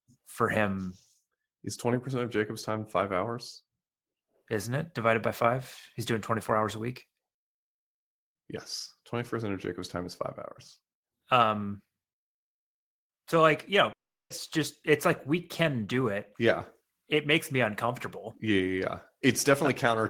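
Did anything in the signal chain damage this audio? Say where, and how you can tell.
Yes. At the network stage, a long network dropout from 13.92 to 14.31 s, likely a run of lost packets: about 0.38 s of audio never arrived. The receiver briefly smeared the last sound into a fading buzz, then held near-silence before speech resumed, with that stretch gone.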